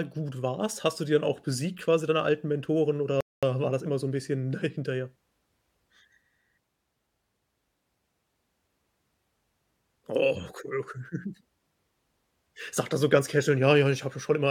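At 3.21 s the speech drops abruptly into silence, holds there until 3.43 s, and then picks up again at exactly the point where it broke off, coming back in on "war das immer so". Nothing is skipped, only delayed by about 220 ms. That is a rebuffering stall: the player used up the audio it had downloaded, paused playback while waiting for more data to arrive, and then carried on, adding that gap to the clip's running time.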